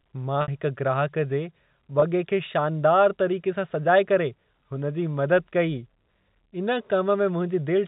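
Packet loss with pitch repetition occurs at 0.42 to 0.48 s and again at 2.00 to 2.02 s. Audio went missing, about 60 ms in the first gap, which fits three lost 20 ms packets, and 20 ms in the second, and the receiver filled each hole by repeating the last pitch period of the speech. The second sounds like a brief, slightly held buzzy tone, while the first, longer than the roughly 50 ms fade, fades into silence before the speech resumes with a short cross-fade over the band-limited G.711 telephone channel.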